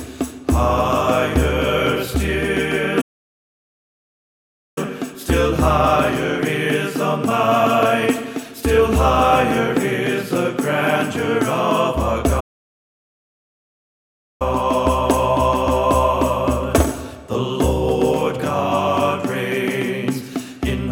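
The player most likely ran short of data or had its thread blocked, causing a playback stall twice: from 3.01 to 4.78 s, about 1.75 s, and from 12.40 to 14.42 s, 2.0 s. Each time, the sound cuts off in mid-flow to silence, then resumes.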